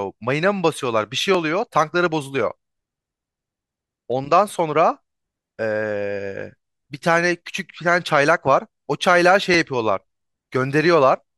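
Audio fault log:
1.35 s, 4.52 s, 6.57 s, 9.54 s: dropped samples. Four isolated sharp clicks in the speech, each a thin vertical line across the spectrum. Likely a fraction of a millisecond of samples missing, so the waveform jumps abruptly to a later value without any sound being lost.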